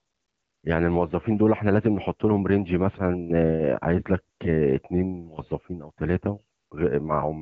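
From 0 to 0.63 s, then briefly at 4.35 to 4.39 s and 6.57 to 6.71 s, the speech path drops into AMR comfort noise. The transmitter treated these gaps as silence and stopped sending speech frames, so the receiver painted in a smooth, even hiss built from a rough sketch of the background. Unlike a noise gate, which leaves dead silence, or packet-loss concealment, which smears speech, here a synthetic bed switches in with its own steady texture.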